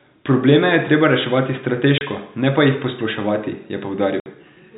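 Packets went missing and the receiver filled the gaps with silence (packet loss filled with silence): a 30 ms hole at 1.98 s, between "je treba reševati" and "ne pa jih posploševati", and a 60 ms hole at 4.20 s, likely two 30 ms packets. Each drop starts and ends abruptly.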